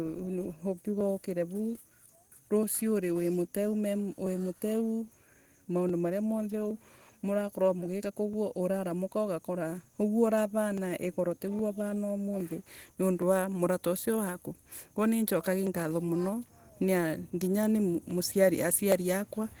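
Speech coded with Opus voice compression at 16 kbps in hybrid mode sounds plainly muffled and hoarse, with the coarse, faintly robotic texture of low-rate coding throughout. From 0.19 s to 18.92 s, about twenty regular clicks recur every 0.82 s, likely clock drift buffer slips: a mismatch of about 0.1% between device clocks forcing a drop or repeat of a few tens of samples each time.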